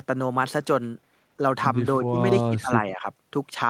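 At 2.01 to 2.18 s and again from 2.41 to 3.07 s the speech sinks by up to about 20 dB, in ducked chunks. That's speech suppressed in double talk, likely an echo canceller clamping down when both ends talked at once.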